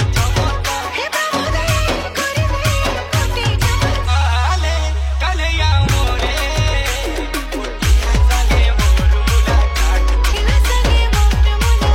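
At 1.44 to 1.50 s, 4.04 to 4.09 s and 10.27 to 10.33 s there are brief bursts of damaged data in the compressed stream, each lasting about 50 to 60 ms. Corrupted or missing bytes leave the decoder unable to interpret those frames correctly. It loses frame sync and must hunt for the next valid header, producing a short chirp or blip in place of the intended sound each time.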